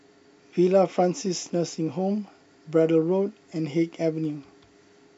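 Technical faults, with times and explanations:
2.28 s and 4.25 s, dropped samples: each is a single sharp click, likely from a handful of missing samples making the waveform jump, too brief to leave any audible gap.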